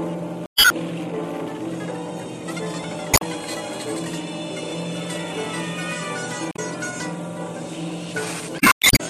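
Music, interrupted four times by brief disruptions: at 0.43 to 0.72 s, 3.10 to 3.22 s, 6.50 to 6.59 s and 8.56 to 8.89 s. These are the mark of damaged data in a compressed stream. Corrupted or missing bytes make the decoder misread the frames at those points and lose sync, so it emits garbled output while it hunts for the next valid frame header and recovers.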